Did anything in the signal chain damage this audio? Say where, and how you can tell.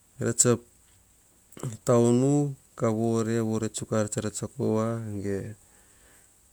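No. Nothing in the chain damaged it.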